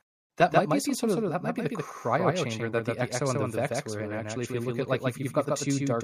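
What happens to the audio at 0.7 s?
At 0.7 s the speech has a second, slightly quieter copy of itself trailing around 150 ms behind, so every syllable is followed by a flat, slapback-like repeat with no decay or room sound to it. This doubled audio track runs through the whole clip, not just this moment. The likely cause is the same signal being captured twice, once through a slower path, with the late copy mixed in about 5 dB down.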